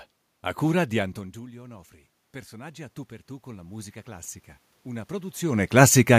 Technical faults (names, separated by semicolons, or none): automatic gain rising